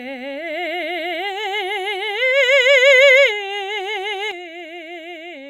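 One channel drops out at 4.31 s and stays out to the end at 5.50 s. The music suddenly falls by about 6 dB, likely because one stereo channel went silent, so the mono sum keeps only half the shared signal and loses whatever that side alone carried.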